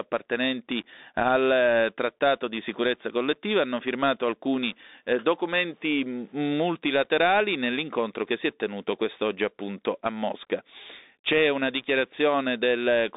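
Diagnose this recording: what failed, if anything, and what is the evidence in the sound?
Codec stage, throughout: Bluetooth CVSD headset codec. The spectrogram cuts off hard at 3.8 kHz, and the one-bit adaptive-step coding leaves a granular hiss and scratchy, overloaded sibilants.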